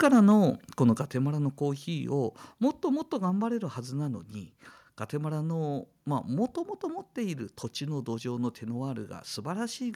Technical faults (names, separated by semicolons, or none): microphone overload; microphone volume stepped down